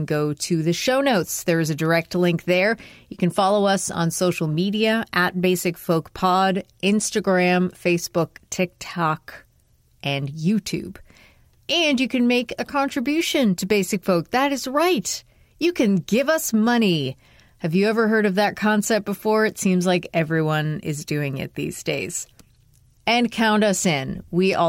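Nothing here stands out as a technical fault at any point in the recording.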